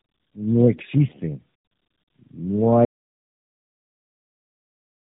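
Throughout, tandem speech coding: the speech sounds rough, muffled and warbly, with nothing above 3.8 kHz, pointing to roughly three low-bitrate speech codecs in series. From 2.85 s to the end, an audio dropout to silence leaves silence with no room tone, likely from lost input while recording continued.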